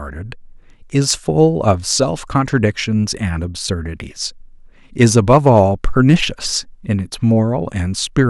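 Hard clipping distorts the speech from 1.11 to 1.93 s, overdriven by about 6 dB, then again from 5.02 to 5.60 s at about 3 dB and briefly from 6.09 to 6.14 s at about 2 dB. Peaks exceeding the stage's ceiling are cut flat, adding high harmonics heard as harsh crackle on loud syllables.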